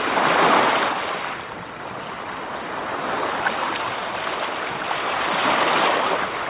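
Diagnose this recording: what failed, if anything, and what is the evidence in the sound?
No failure is audible anywhere in this recording.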